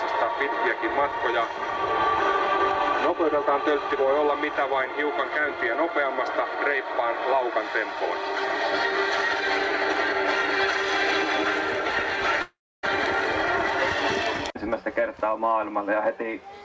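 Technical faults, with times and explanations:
12.42–12.85 s, long network dropout: the last sound is stretched into a buzzy, fading continuation, leaving about 0.29 s of near-silence before the audio returns at 12.85 s with roughly 0.42 s of material simply gone, not delayed. This likely comes from a stretch of packets that never arrived, with the receiver concealing them. A brief packet-loss glitch would be masked within tens of milliseconds. A natural pause would not hold a frozen, fading tone, and the audio after it would pick up where it left off.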